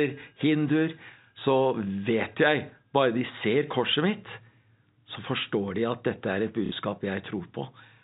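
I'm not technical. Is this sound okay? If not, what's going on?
No. At about 6.66 to 6.72 seconds the speech has a short glitch caused by packet loss with the last packet repeated. The audio travels in small chunks, and here roughly 60 ms of it never arrived, which fits two 30 ms chunks going missing. The receiver filled the gap by replaying the last good chunk, so the sound briefly stutters with a robotic buzz. The muffled phone-line quality comes from the telephone coding used and is expected.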